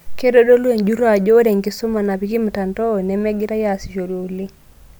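Speech, with no audible technical faults anywhere in the recording.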